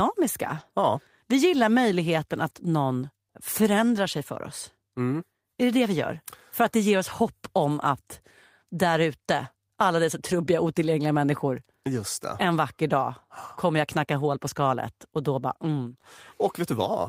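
Nothing in this recording of speech stood out as a technical problem on listening.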